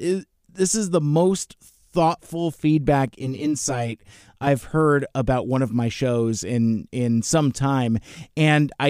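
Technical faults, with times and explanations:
3.08–4.47 s, channel delay (comb filtering): after "is the most thoughtful", one channel lags about 10 ms. Summed to mono, it cancels at evenly spaced notches from around 50 Hz upward, sounding hollow until "heard about one of".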